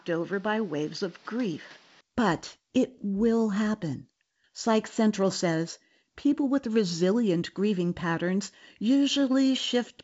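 From the start until about 2.01 s, the speech sounds dull, with nothing above 6.6 kHz, and it sits roughly 5 dB quieter than the rest, over a different background noise about 30 dB down. At 2.01 s it clears up with no gap. The likely cause is an input switched to a poorer device. Tone, level and noise floor all change together, which sets it apart from a plain filter or gain change. Afterwards the wideband telephone coding carries sound up to about 7.7 kHz.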